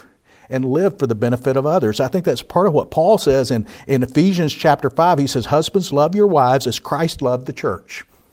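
Nothing in this speech recording stands out as a technical fault, so there's nothing here to flag.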